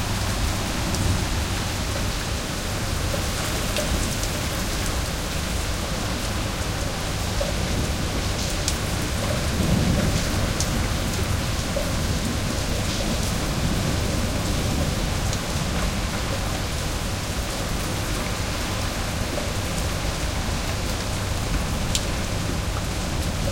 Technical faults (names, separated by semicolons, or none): none